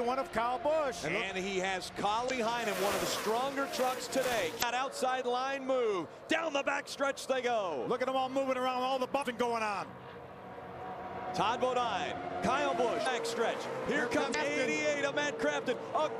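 Brief chirps or blips cut through the sound at 2.26–2.30, 4.59–4.63, 9.19–9.23, 13.03–13.07 and 14.31–14.35 s, each about 40 ms long. This is damaged data in a compressed stream: corrupted bytes throw the decoder out of sync until it finds the next frame header.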